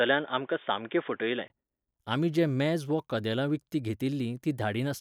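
From the start to 1.5 s the speech is dull and boxy, with nothing above 3.6 kHz and a faint background noise around 40 dB down. A 20 ms silence then precedes the full band, likely an input switched to a poorer device. That gap and the changed noise floor set it apart from a filter or codec bandwidth drop.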